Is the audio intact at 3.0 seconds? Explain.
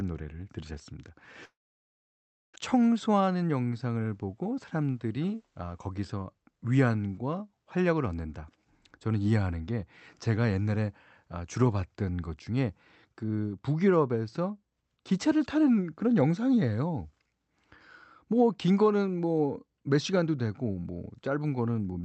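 No. A jitter buffer speed-up runs from 2.74 to 3.57 s: the receiver cut repeated pitch-period slices, about 70 ms in all, so the speech plays at 109% speed at the same pitch and sounds hurried. On a spectrogram, harmonic spacing is unchanged but syllables and formant transitions are squeezed closer together. The waveform shows shortened segments with fewer cycles.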